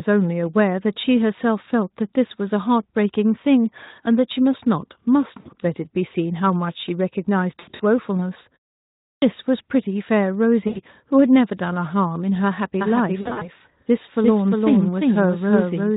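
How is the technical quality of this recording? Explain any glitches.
The recording has three kinds of fault: repeated VoIP packet loss concealed by the speech codec, one clipped start after a pause, and a doubled audio track in the final few seconds. The light, slightly hoarse texture of the Speex codec runs throughout.

VoIP packet loss concealed by the speech codec occurs four times: 5.40 to 5.49 s (60 ms lost), 7.59 to 7.81 s (160 ms scattered over 200 ms, longest gap 80 ms), 10.67 to 10.81 s (80 ms), and 13.21 to 13.48 s (140 ms scattered over 200 ms, longest gap 40 ms). At each gap the decoder keeps repeating its last pitch and spectral shape at falling gain. The result is a brief buzzy, smeared tone that fades. Because each frame builds on the previous one, the speech stays thin or distorted for a short while after real packets resume.

A clipped start after a pause occurs at 9.12 s. 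The audio resumes after about 0.6 s of silence, and roughly the first 100 ms of sound is missing. The output device appears to have idled during the pause and needed time to wake and lock again. The speech therefore begins abruptly, with its onset cut away instead of building up naturally.

A doubled audio track starts abruptly at 12.81 s and continues to the end. A second full-band copy of the speech trails the original by roughly 400 ms at about the same level. It has no decay and no room colouring, so it sounds like a distinct overlapping repeat rather than a reverberant echo. The likely cause is the same signal being captured twice, once through a slower path. The packet loss at 13.2 s falls inside this doubled section.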